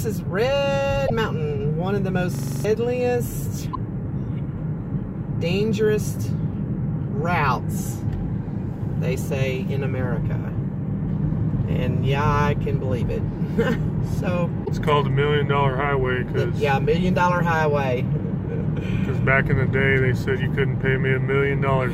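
At 1.06 to 1.10 s a brief glitch of about 44 ms breaks the sound, and the audio resumes slightly ahead of where it left off. This is likely a broken MP3 bit reservoir. After frames were dropped, the next 26.1 ms frame reached back into the reservoir for its data and decoded bytes that belonged to a different frame. The same short disruption, about 42 to 44 ms, recurs at 3.72 to 3.77 s and at 14.64 to 14.69 s.

At 2.35 to 2.65 s a system hang loop replays one 42.67 ms slice of sound seven times in succession. This fits a 2048-sample buffer that the hardware kept cycling through while the host stalled. Repeating at 23.4 Hz, it comes across as a rapid mechanical stutter, close to a coarse buzz, and roughly 300 ms of the sound is missing when normal playback returns.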